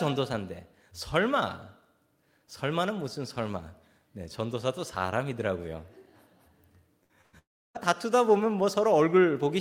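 Bursts of packet loss at 7.03–7.12 s and 7.21–7.36 s drop about 60 and 120 ms; the receiver stretches the last sound into a brief fading buzz or hiss before speech resumes. From 7.39 to 7.78 s, a short fading fill gives way to about 290 ms of silence, likely a long network dropout, before speech returns with the stretch missing.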